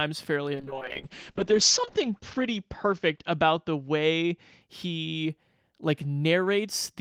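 From 0.56 s to 4.67 s a call bitrate drop starves the encoder of bits. The speech turns rough and muffled, worst for about 1.4 s, which fits a fall from near 32 to 7 kbps. A spectrogram shows everything above 8 kHz sliced off flat, down from 20 kHz.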